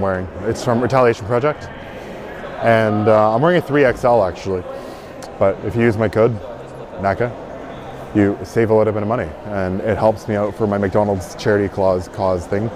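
The signal holds steady throughout, with no technical faults to be heard at any point.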